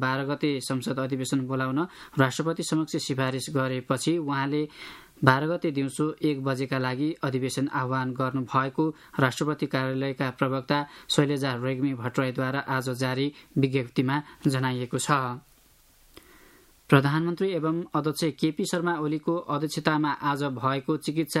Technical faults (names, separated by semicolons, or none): none